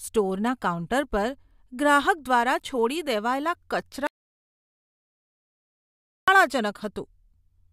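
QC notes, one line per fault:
4.07 to 6.28 s, audio dropout to silence: the input signal was likely lost for a while, through a disconnected device, a failed link or an accidental mute, while recording carried on writing silence. The speech cuts off abruptly mid-flow at 4.07 s and resumes just as suddenly at 6.28 s. Between those points there is total silence, with no room tone or background hiss, and about 2.2 s of speech is missing.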